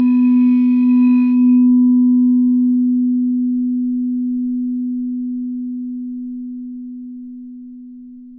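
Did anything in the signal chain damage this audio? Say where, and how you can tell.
No, nothing in this recording of everyday sounds points to damage at any stage of the signal chain, from capture and conversion through to storage and playback.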